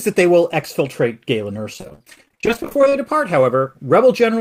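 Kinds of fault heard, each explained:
Repeated packet loss (robotic sound): From 1.73 to 2.95 s the speech breaks into dozens of short holes, none longer than 41 ms, each patched by stretching the previous sound. Nearly half the span is concealed, which sounds choppy. The spectrogram shows repeated smeared, frozen slices, and the waveform shows stuttering, chopped segments.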